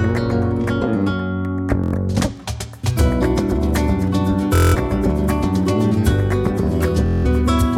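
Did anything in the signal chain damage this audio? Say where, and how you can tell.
Yes, on the Bluetooth link. There's Bluetooth stutter at 1.84–1.94 s, 4.55–4.76 s and 7.06–7.26 s. The receiver loops its last slice into a machine-gun buzz while packets are missing, then jumps ahead, skipping about 93 ms, then 186 ms twice.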